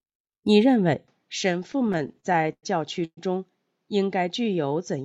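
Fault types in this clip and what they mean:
Input switched to a poorer device: From 1.07 s the sound turns dull and about 5 dB quieter. This likely comes from a lesser microphone.
Repeated stalls (stutter): Between 1.63 and 2.65 s the audio keeps halting and resuming, about seventeen times. The longest hold lasts about 0.1 s. It drags but loses nothing.
Call audio freeze: At 3.05 s the sound hangs and fades into about 60 ms of silence. It resumes after 0.12 s. Late packets are the likely cause, and nothing is lost.
Jitter buffer slow-down: From 4.40 to 4.74 s the audio runs at 88% speed with unchanged pitch. The receiver stretches it by 48 ms to rebuild its reserve.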